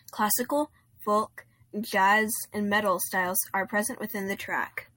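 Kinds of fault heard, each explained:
No technical fault can be heard in this speech recording. Nothing in the sound points to a problem in how it was captured or passed along.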